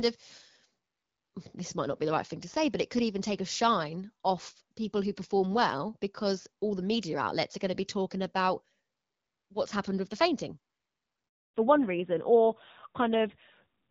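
At 11.28 s the speech cuts out abruptly and stays silent for 260 ms, a handover gap: no speech frames arrived while the call switched networks. From 11.54 s to the end, the voice sounds duller and rougher with nothing above 4 kHz. This is a fallback to narrowband, which fits HD Voice dropping to an AMR-NB codec at about 7.4 kbit/s.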